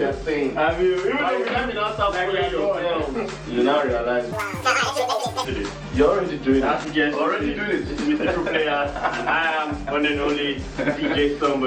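From 4.32 to 5.45 s the sound jumps an octave and races at double speed: audio read two samples at a time, consuming sample pairs as single frames.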